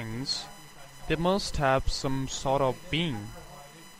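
Timecode bleed runs under the entire speech. Linear timecode at 24 frames per second has leaked in from a nearby track or cable. Its square wave flips between roughly 1 and 2 kHz. It sits about 30 dB down, a steady chirping warble.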